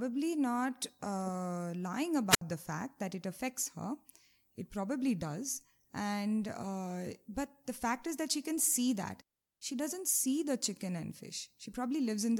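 Speech with a wireless microphone squelch dropout from 2.29 to 2.41 s: hiss rises as the radio signal fades, the receiver mutes for about 67 ms, then the voice returns.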